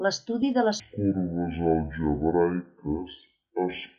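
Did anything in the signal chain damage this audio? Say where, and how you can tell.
Yes. From 0.8 s, right after "de les", to the end, this speech is a section at the wrong speed, running at about half speed (0.501×) with pitch dropped roughly ten semitones, so it turns deep and slow. The stage is likely playback or editing resampled against the wrong clock. On a spectrogram, harmonics and formants fall toward the bottom and syllables stretch to double length. The waveform shows each pitch period roughly twice as long.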